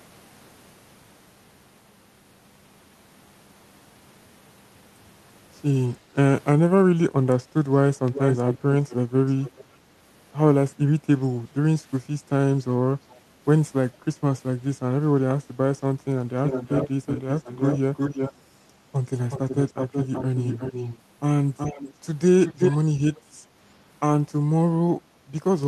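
At 6.02 s the echo canceller clamps the microphone while the loudspeaker plays, so the background is gated, dipping about 5 dB for roughly a tenth of a second. From 8.06 s an echo leak follows, likely from an echo canceller failing to remove loudspeaker pickup. A delayed copy of the speech returns 416 ms late at 8.06–8.95 s, 9.26–9.65 s and 13.1 s, then 371 ms late at 16.37–18.33 s, 19.3–20.98 s, 21.57–21.93 s and 22.41–22.77 s. It ranges from barely audible to nearly as loud as the speech.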